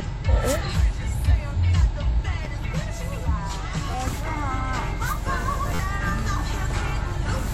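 A repeated buffer stutters the sound at 2.45 s, from 3.91 to 3.94 s, and from 5.75 to 5.79 s. New audio arrived late, so a chunk of about 11.6 ms, which fits a 512-sample buffer, replayed. Each is a click or brief buzz, the later ones longer.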